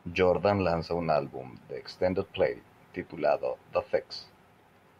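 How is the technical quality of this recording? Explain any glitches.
No technical glitches can be heard anywhere in this speech recording; the signal stays steady and continuous throughout.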